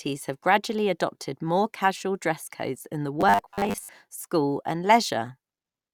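Robotic sound from repeated short buffers appears from 3.21 to 3.89 s, where the speech turns into a stiff, metallic buzz pitched at 100 Hz that still loosely tracks the syllables. The likely cause is audio arriving too slowly, with the playback filling the gaps by looping the most recent slice, which at that pitch points to a 10 ms buffer. Roughly half the audio in that stretch is repeats rather than new sound.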